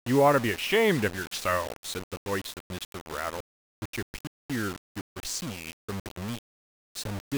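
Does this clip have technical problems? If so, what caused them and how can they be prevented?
Yes. Low bit depth without dither runs through the whole speech clip as grainy distortion that tracks the voice, with quiet passages turning gritty and error sitting only about 15 dB below the signal. It likely comes from rounding to roughly 5 bits with no dither. Keeping 16 or more bits, and dithering whenever bit depth must be reduced, prevents it.

A playback stall at 4.27 to 4.50 s cuts the speech to silence for about 225 ms mid-flow, likely because the player ran out of buffered data or its thread was blocked. A larger playback buffer and a dedicated audio thread prevent it.

Time-compressed catch-up follows from 4.50 to 6.00 s. The speech runs about 1.15 times fast at normal pitch, as small pieces are cut and cross-faded to clear the backlog from the stall. Preventing the stall removes any need for catch-up.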